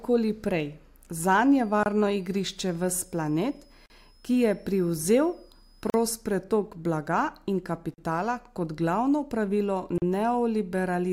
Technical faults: switching supply whistle; gap at a join of encoded pieces

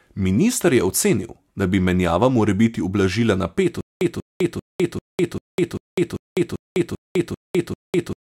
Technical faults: stutter with silent gaps

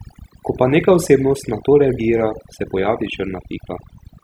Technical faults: overdone noise removal

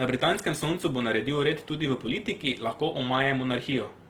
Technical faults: Opus compression

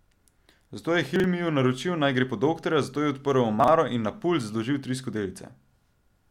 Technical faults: chunks out of order

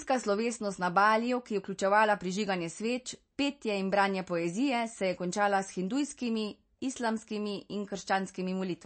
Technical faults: MP3 compression; clock slip clicks

